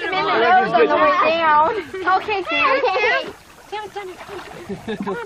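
No technical faults are audible.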